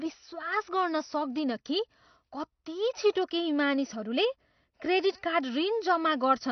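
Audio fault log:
Throughout: AAC compression. The speech is dull, with nothing above 6 kHz and plainly audible codec damage. This is likely a perceptual coder like AAC-LC starved of bits, which fits a bitrate near 32 kbps. It discards the high band and coarsely quantises what remains.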